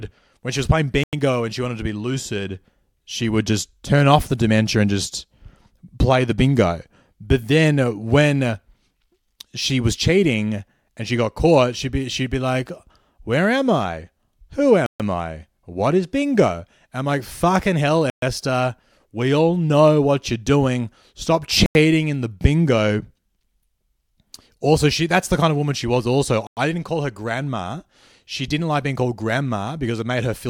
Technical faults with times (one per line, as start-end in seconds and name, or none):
1.03-1.13 Bluetooth stall
14.86-15.00 Bluetooth stall
18.10-18.22 Bluetooth stall
21.66-21.75 Bluetooth stall
26.47-26.57 Bluetooth stall